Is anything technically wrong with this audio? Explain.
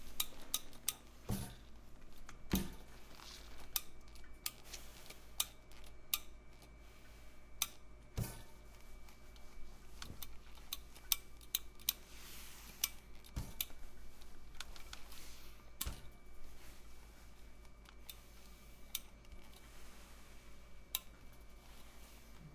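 No, nothing technically wrong can be heard in this recording; the signal holds steady throughout, with no audible problems in its level, timing or continuity.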